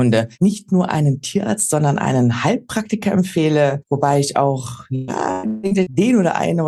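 From 4.95 to 5.97 s the audio breaks up with repeated packet loss, giving a robotic sound. Audio data went missing or arrived late six times in that second. Each hole was patched by stretching the last good sound forward. The next hole came soon after. About half of the span is concealed this way, roughly 0.5 s in total. The longest gap lasts 160 ms. The result is choppy and robotic, with pieces missing.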